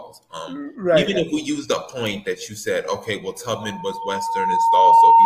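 At 3.56 s a loudspeaker feedback squeal starts and runs to the end of the clip at 5.26 s. The microphone is picking up the speaker it feeds, and at 912 Hz the loop gain tips above one, so that single tone feeds on itself, swelling over roughly a second and a half to sit about 15 dB above the sound. Unlike a steady interfering whine, which arrives at full strength and holds, this tone grows from nothing and climbs until it levels off.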